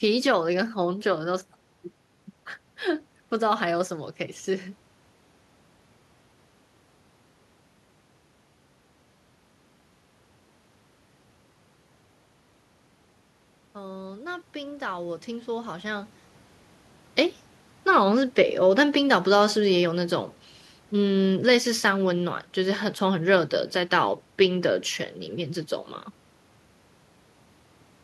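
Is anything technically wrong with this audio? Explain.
Yes, there is one fault. From 13.73 to 16.16 s, the automatic gain is rising. The gain control judged the input too quiet. It raised its gain slowly, by about 6 dB. Voice and room noise swell together over those 2.4 seconds. The level changes near 4 s and 16 s come from the talker moving, not from the system.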